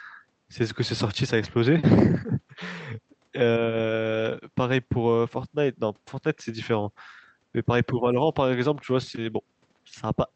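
From 7.93 to 8.05 s the speech briefly sinks by roughly 10 dB, a short dip of about a tenth of a second. This is likely speech suppressed in double talk: with both ends talking at once, the echo canceller treated the near talker as loudspeaker echo and attenuated it. On a waveform the envelope pinches inward there; a spectrogram shows a faint vertical gap. That band tops out near 8 kHz throughout, which fits the Opus call path.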